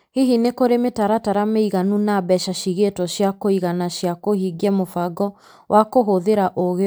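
No technical faults can be heard anywhere in the recording.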